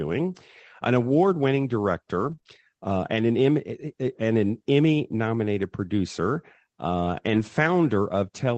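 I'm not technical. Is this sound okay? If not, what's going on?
No. Two brief glitches stand out in this speech recording.

Repeated packet loss (robotic sound), from 2.19 to 2.57 s: small pieces of the audio got lost three times in quick succession, the longest about 28 ms. The call software covered each hole by stretching the sound just before it, so this stretch comes out choppy, with pieces missing.

Lost packet rebuilt from error correction, from 7.33 to 7.43 s: a few small chunks of audio went missing, but the chunk after each one carried a rough backup copy. The software played those copies, so there's no gap, just about 60 ms that sounds grainier and noisier.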